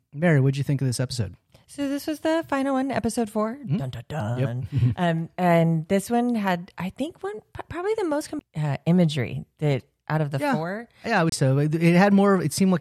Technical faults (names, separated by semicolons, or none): CD skip